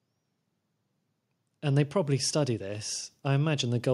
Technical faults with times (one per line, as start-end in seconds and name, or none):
1.61-3.94 automatic gain rising